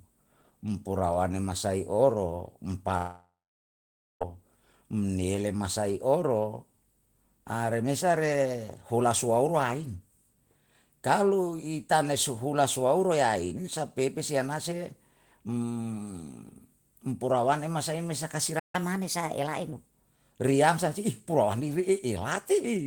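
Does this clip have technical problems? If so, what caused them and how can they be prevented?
Yes. From 2.97 to 4.22 s there is a long network dropout, likely from packets lost in transit. About 1.24 s of audio never arrived. The receiver stretched the last sound into a fading buzz, and most of the gap ends up near-silent before the speech resumes past the missing part. A larger jitter buffer, forward error correction or a more stable connection would prevent this.

At 18.59 s a playback stall, likely from the player's buffer running dry or its audio thread being blocked, cuts the speech off for about 0.15 s until 18.75 s. The sound stops mid-flow and then continues. Keeping the audio thread at high priority with enough buffered data would prevent this.

From 18.75 to 19.73 s the player runs a catch-up at higher speed, resampling its backlog at 1.15 times normal rate to recover the lost time. 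The speech sounds hurried and about two semitones higher, then drops back to normal. Time-stretching without pitch change, or simply avoiding the stall, would prevent this.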